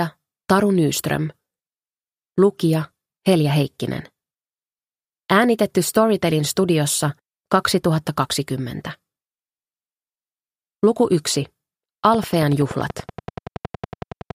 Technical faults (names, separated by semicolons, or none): train of clicks